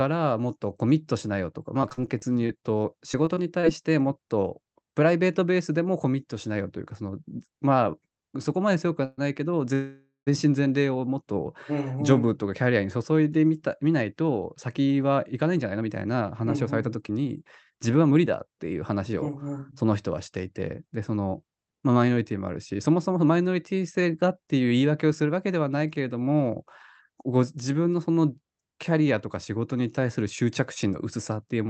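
Speech passed through a call codec whose top end stops at 8 kHz. From 1.81 to 3.65 s it turns choppy and robotic, with a dozen or so short holes (the longest about 44 ms) smeared over by stretched-out sound. This is repeated packet loss: the receiver kept patching missing audio by extending what came before. At 9.05 s the sound hangs in a fading buzz for 0.13 s, and from 9.74 to 10.29 s it does so again for 0.53 s, dropping to silence for about 0.15 s before resuming where it left off. These are call audio freezes, likely caused by delayed packets draining the jitter buffer, so delay was inserted without losing any speech. Between 13.93 and 22.57 s the speech sounds hurried, running about 8% fast at unchanged pitch. This is a jitter buffer speed-up, in which tiny pitch-period slices totalling roughly 0.7 s were trimmed to cut built-up delay.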